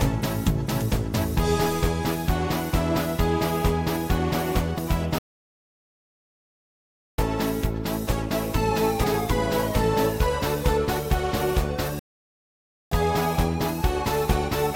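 Damaged data in a compressed stream at 4.74 to 4.79 s: a brief glitch lasting about 44 ms where corrupted bytes make the decoder misread frames, lose sync and skip ahead to the next valid frame header. The same fault returns at 9.00 to 9.05 s, with another short glitch.

Playback stall at 5.18 to 7.18 s: the sound halts for 2 s, then resumes, likely because the player ran out of buffered data or its thread was blocked. A second stall at 11.99 to 12.92 s silences the output for about 0.92 s.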